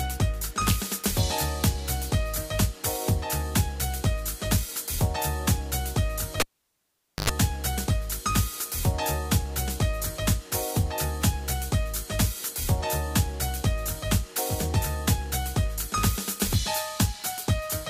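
At 6.40 s the cable is pulled and plugged in: a pop, 0.85 s of flat waveform, a 94 ms burst of 50 Hz buzz showing harmonic lines, then another pop at 7.30 s.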